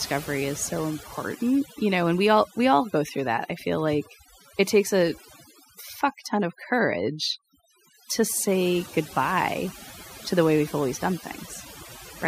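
Speech with overdone noise removal running throughout: an over-aggressive noise reducer mutes any frequency band near its noise estimate, taking quiet speech detail with it. Pauses fall to near silence flecked with twinkling specks. A spectrogram would show a blank background scattered with isolated dots and speech harmonics broken into ragged patches.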